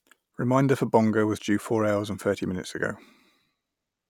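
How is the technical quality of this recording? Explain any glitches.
The speech signal is technically intact, with no dropouts, distortion, or other glitches anywhere in the recording.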